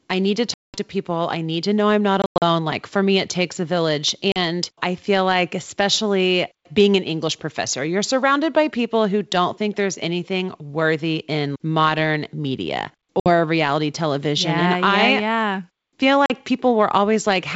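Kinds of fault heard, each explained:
Packet loss on an ADPCM call: missing packets were filled with silence, knocking the decoder's predictor and step size out of step with the sender's. Five stretches of hard-edged gaps of 40 to 200 ms result, the speech returning slightly distorted.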